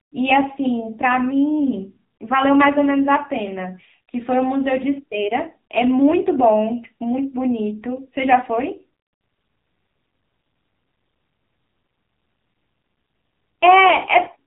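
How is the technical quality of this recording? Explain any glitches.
Quality's pretty rough: the whole recording has been through the AMR narrowband mobile codec, the classic 2G/3G phone speech coder, and it's been squeezed hard.

It runs from start to finish. Everything above about 3.8 kHz is gone, so the speech sounds boxed-in and dull. AMR-NB rebuilds speech from a vocal-tract model fed with a handful of pulses per frame, and with so few bits the voice comes out buzzy and synthetic. The heavy damage suggests one of the lowest modes, around 6.7 kbps.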